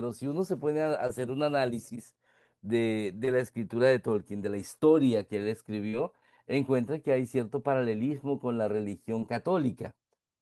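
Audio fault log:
1.07–1.11 s, 3.25–3.29 s, 5.89–5.95 s, 9.19–9.23 s: short concealed packet loss. About 20 ms (40 ms at 5.89 s) went missing, and the receiver extended the preceding sound to cover each gap, which heard as a brief smear or wobble. On a spectrogram the harmonics flatten into a repeated slice, and the waveform shows a copied stretch of cycles.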